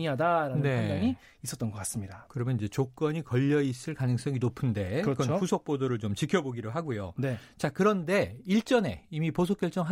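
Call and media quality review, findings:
No audible faults found on listening review of the speech clip; nothing to attribute to any component.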